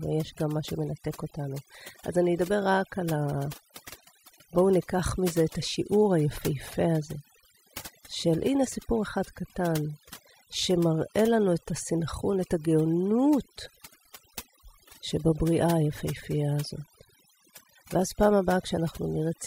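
Overdone noise removal runs through the whole recording: bands sitting near the estimated noise floor are pulled down or cut outright, so the background collapses into near silence dotted with twinkling specks. Unlike a noise gate, it works band by band rather than muting everything at once.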